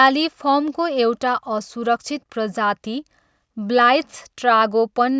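Speech recording with no audible technical faults anywhere.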